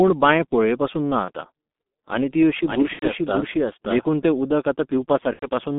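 Throughout, the speech passes through a G.723.1 codec at about 6.3 kbit/s, squeezed into a telephone band of roughly 200 Hz to 3.6 kHz. The coder models the voice in coarse 30 ms frames and updates that model slowly, so the damage is heavy: the speech sounds muffled and hoarse, nothing above 3.6 kHz survives, and consonants smear into one another.

At 1.25 to 1.31 s, VoIP packet loss concealed by the speech codec leaves a 30 ms gap, which fits a single lost frame. The decoder fills it by repeating its last pitch and filter at falling gain, giving a brief buzzy, stretched tone. Because each frame builds on the previous one, the voice stays weak and distorted just after.

From 2.67 to 4.05 s a doubled audio track appears. The cause is likely a second, slower capture path mixed back in. A full-band copy about as loud as the original runs roughly half a second behind, with no decay or room colour, and it starts and stops abruptly at those times. 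Inside that stretch, 2.93 to 3.06 s brings a 90 ms packet loss, which fits three missing frames. The concealment drags on longer and fades into coloured buzz before the speech recovers.

The same 90 ms kind of loss recurs at 5.33 to 5.46 s, again as a fading, stretched buzz with weak, distorted speech afterwards.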